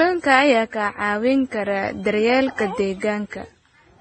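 Across the whole clip the speech carries the marks of transcoding between lossy codecs, likely a low-rate Vorbis encode later re-encoded as MP3 at a bitrate in the region of 32 kbit/s. Nothing is heard above about 8.4 kHz. Unlike a single low-bitrate encode, two different kinds of artefact sit on top of each other: the second encoder spends its scarce bits reproducing the first one's artefacts, then adds its own.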